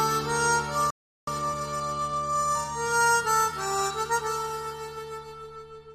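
At 0.90 s the sound cuts off mid-flow and the output goes silent for about 0.37 s, until 1.27 s. This playback stall likely came from the player running out of buffered data. On a waveform it appears as a flat gap, and on a spectrogram as a blank vertical band.

From 1.27 s to 3.71 s a time-compressed catch-up follows, running 1.15 times faster at normal pitch as small pieces are cut and cross-faded. It sounds hurried. Events sit closer together on the spectrogram, with faint seams at splice points.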